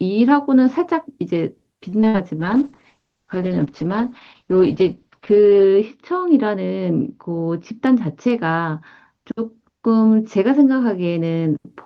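From 1.89 to 2.16 s, repeated packet loss (robotic sound) chops the speech: four short gaps, the longest 59 ms, are patched by stretching the preceding sound, giving a choppy stutter rather than silence. At 2.41 s a call bitrate drop sets in and lasts until 11.65 s. The Opus encoder falls from 32 to 8 kbps and its bandwidth narrows from 12 kHz to 8 kHz, so the voice turns watery and muffled without losing pieces. From 7.51 to 7.96 s a jitter buffer speed-up trims roughly 50 ms, making the speech run about 8% faster while its pitch stays unchanged.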